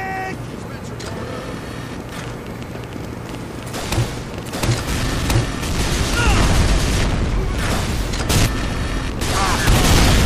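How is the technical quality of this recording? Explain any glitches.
The recording is marred by one persistent fault. From 2.09 s to 10.23 s a train of clicks runs, about seven per second at an uneven pace, roughly fifty in all, peaking a few dB above the sound. Likely interference from nearby equipment or a faulty connection, it ticks throughout, showing as thin vertical spikes on the waveform and broadband vertical lines on a spectrogram.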